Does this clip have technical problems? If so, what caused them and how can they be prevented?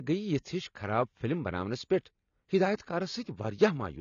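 Yes. The speech was likely squeezed through AAC-LC at a low bitrate, around 24 kbps. The encoder drops everything above 7 kHz and starves the remaining bands, so throughout the clip the speech sounds dull and smeared, with a plainly audible warbling, fizzy AAC compression texture on sibilants. To prevent it, encode at a higher bitrate or keep an uncompressed copy for delivery.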